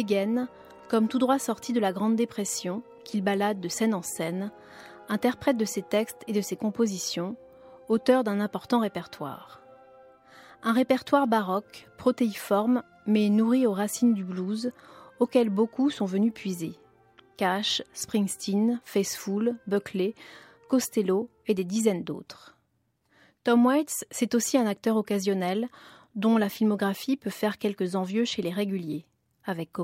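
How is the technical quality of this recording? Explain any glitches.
No glitches or technical faults can be heard here.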